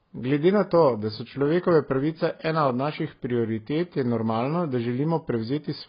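Dull, smeared speech with a fizzy, warbling edge on sibilants and nothing above 5.3 kHz throughout, likely heavy AAC compression at a low bitrate, around 16 kbps.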